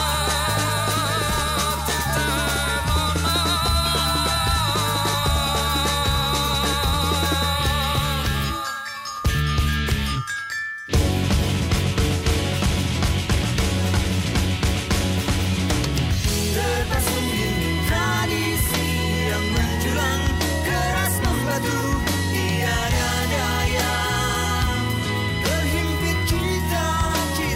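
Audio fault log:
No technical faults can be heard anywhere in the recording, and the signal holds steady in continuity throughout.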